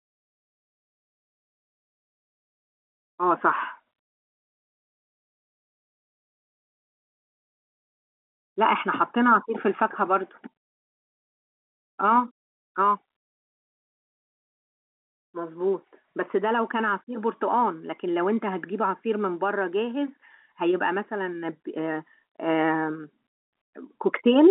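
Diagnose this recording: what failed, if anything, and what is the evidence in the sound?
Nothing failed: the speech sits in a telephone band of 200 Hz to 3.5 kHz with nothing above 3.8 kHz, which is just the signature of G.711 telephone coding at what sounds like the standard 64 kbps, working as intended.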